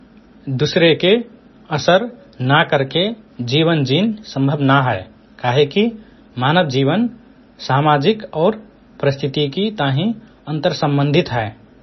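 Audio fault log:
Throughout: likely MP3 compression. Nothing sounds above 5.9 kHz, so the speech is dull and muffled. Weak frequency lines drop in and out between frames, giving a heavy watery, swirling texture. The damage fits a very low bitrate, around 24 kbps.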